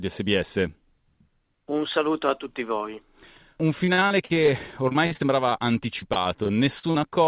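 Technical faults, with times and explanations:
3.84 to 5.53 s, repeated packet loss (robotic sound): about 15 short dropouts, none longer than 48 ms. Each one gets patched by stretching the previous sound, so roughly a fifth of this stretch is filler, and it comes out choppy.
5.99 to 6.97 s, repeated packet loss again: seven more holes, the longest 38 ms, with concealment covering about 18% of the span. That gives the same robotic chop over narrowband audio that stops at 4 kHz, which fits a G.711 call path.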